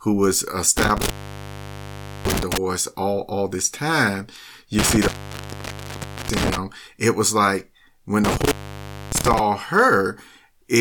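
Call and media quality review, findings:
Speech cuts out with crackle at the edges and faint hiss while open, at 0.78–2.58 s, 4.79–6.58 s and 8.24–9.39 s (gaps about 1.16, 1.22 and 0.61 s). Intermittent contact: a loose cable or plug momentarily opening the line.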